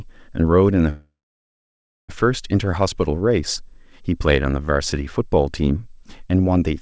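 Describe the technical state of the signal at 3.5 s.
At 3.5 s the speech is intact, with no dropout, glitch or distortion, and the call path can be heard only in the usual way, with nothing above 8 kHz, as fits a G.722 wideband codec.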